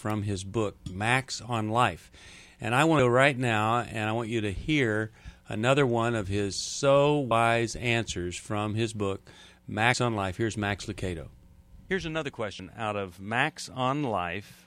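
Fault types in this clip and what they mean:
Compressed frames skipped: whole blocks of coded audio never reach the output, so playback jumps forward at 2.99, 7.31, 9.94 and 12.59 s. The jumps at 2.99 and 12.59 s lose roughly 150 ms each, and the other two roughly 70 ms. That fits losing about four and about two frames of a 32 ms frame size.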